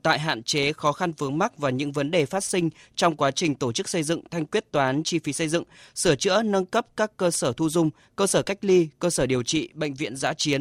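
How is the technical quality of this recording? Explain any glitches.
The recording is compromised by a steady defect across the whole of the speech: a truncated block size mismatch. One processing stage writes blocks slightly longer than the next stage reads, so the tail of every block is discarded. Each cut leaves a small discontinuity, and at roughly 10 ms per block these repeat as a 100 Hz buzz. The size difference is tiny, so the speech runs at essentially its normal speed and pitch. A spectrogram shows harmonics stacked every 100 Hz, and the waveform shows small jumps at evenly spaced 10 ms boundaries.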